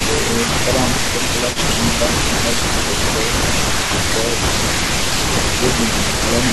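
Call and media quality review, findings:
Speech suppressed in double talk at 1.04 to 1.14 s, 2.14 to 2.42 s and 5.57 to 5.78 s. Level dips, deepest about 10 dB at the first, about 5 dB later. Likely the far-end echo canceller ducking both talkers during overlap.

Echo leak at 1.53 to 1.58 s. Faint delayed copy of the talker, 193 ms behind, about 15 dB below the speech. Likely residual loudspeaker echo the far-end canceller failed to remove, returned down the line.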